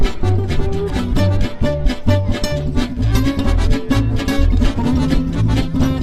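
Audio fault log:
The signal holds steady throughout, with nothing in the audio pointing to a technical fault.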